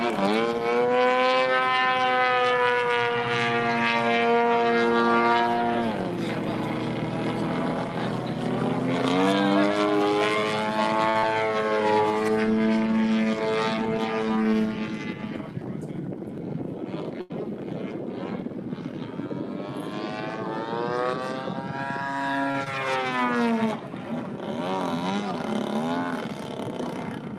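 At 11.09 to 11.17 s a short stall from a late packet holds the sound for 54 ms. The jitter buffer ran dry, so the receiver kept repeating the last fragment until the data arrived, then resumed with nothing lost and the delay 54 ms longer. The same fault returns at 17.21 to 17.32 s, lasting 88 ms, and at 22.51 to 22.56 s, lasting 29 ms. Each one sounds like a sound held too long, with a slight buzz or dip. On a spectrogram the harmonics run flat and unchanging through each hold, and the waveform repeats one period shape over and over.

At 11.19 to 11.24 s, short concealed packet loss follows. About 40 ms of audio never arrived, and the receiver extrapolated roughly 36 ms of substitute sound from what came just before, then crossfaded back into the real signal. A second, smaller loss at 22.64 to 22.68 s replaces 20 ms with 15 ms of fill. Both are heard as a brief smear or wobble. The spectrogram shows a blurred patch where the fine detail dissolves.

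From 14.30 to 14.96 s a jitter buffer speed-up plays the audio at 110% of normal speed. It trims about 70 ms in total by cutting out pieces of one or a few pitch periods one after another, to drain an overfull buffer. Pitch stays the same but the pacing sounds hurried. On the spectrogram the events sit closer together in time while the harmonic spacing stays unchanged.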